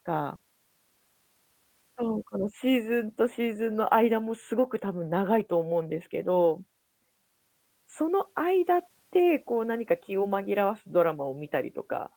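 A speech recording with one short concealed packet loss near 0.35 to 0.41 s: about 40 ms arrived too late to decode, so the receiver extrapolated the preceding sound and crossfaded back. Heard as a brief smear, it shows as unnaturally steady, smoothed harmonics or flat noise on a spectrogram.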